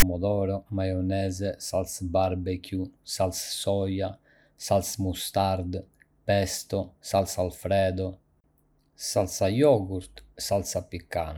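At the very start of the speech, from 0.00 to 0.02 s, a block of text metadata at the head of the file was handed to the decoder as though it were sample data, so the file tags played as audio. Because text bytes cluster in a narrow range of values, they come out as a loud, harsh rasp pushed off to one side of the waveform rather than centred on zero. It lasts about 24 ms and starts and stops abruptly, like a hard-edged burst of static.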